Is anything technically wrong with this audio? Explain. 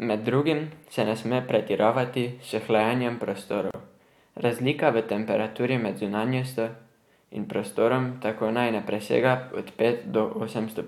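Yes. At 3.71 s, just after "sme pretiravati s hlajenjem", there is a gap at a join of encoded pieces: about 34 ms of encoder delay and padding silence, then the speech resumes exactly where it stopped, unlike a dropout, which loses material.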